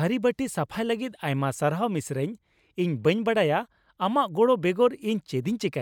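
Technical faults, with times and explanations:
There are no technical faults to report in this speech, so there are no times or explanations to give.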